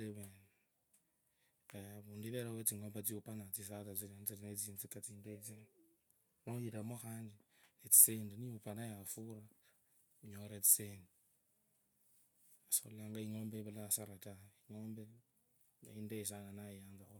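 Nothing stood out as a technical fault on listening to this speech recording.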